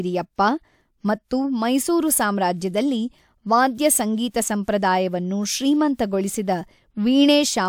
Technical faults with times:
none

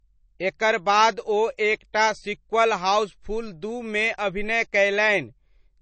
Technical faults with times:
0.00-5.82 low-bitrate audio saved at a high bitrate

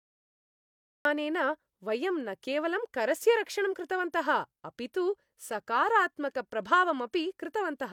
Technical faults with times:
0.00-1.05 cut-off start

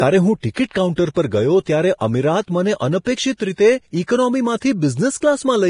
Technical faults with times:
0.00-5.69 Vorbis compression

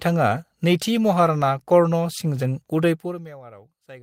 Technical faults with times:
none

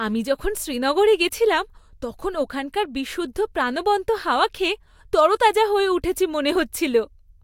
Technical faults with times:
none

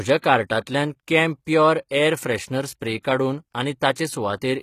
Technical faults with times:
0.00-4.62 HE-AAC compression

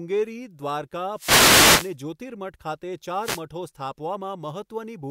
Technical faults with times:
1.13-1.96 wireless microphone noise hit
3.19-3.43 wireless microphone noise hit

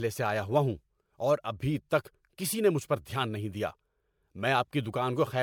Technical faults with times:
0.00-5.42 generation loss

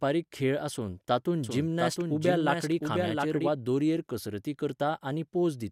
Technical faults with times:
1.44-3.50 doubled audio track

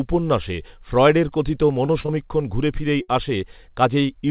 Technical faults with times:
1.86-2.10 short concealed packet loss
3.02-3.10 burst of packet loss

